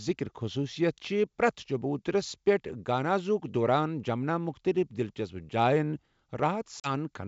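At 6.80 s the speech drops out in a hard-edged 40 ms hole, packet loss on an ADPCM call of about two packets, inside otherwise clean 64 kbit/s G.722 wideband coding. The decoder's adaptive predictor and step size lose track of the sender's, so the speech resumes with brief, slight distortion before settling by 6.91 s.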